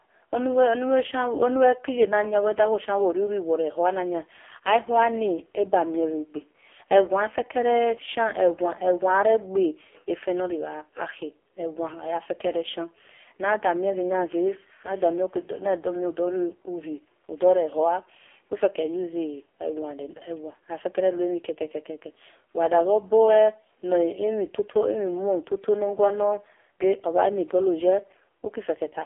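Throughout, the speech carries heavy AMR narrowband mobile codec damage, consistent with a very low AMR-NB mode near 5 kbps. A sparse pulse-excited vocal-tract model leaves a buzzy, synthetic voice within a 300 Hz to 3.4 kHz line band; a spectrogram shows nothing above 3.5 kHz and smeared, blocky harmonics.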